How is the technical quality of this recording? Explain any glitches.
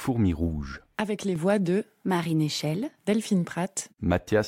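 The recording has one glitch, a sudden gain jump. From 1.00 to 1.36 s, just before "voix de", the level drops by about 5 dB instantly, likely from a gain change applied without a ramp. Unlike a fade or compressor pumping, the speech and background noise fall together at once.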